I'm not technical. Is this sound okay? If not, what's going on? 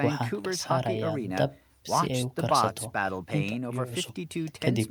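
Yes, this recording sounds fine.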